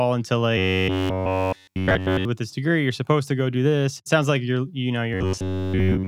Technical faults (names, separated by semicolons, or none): robotic sound from repeated short buffers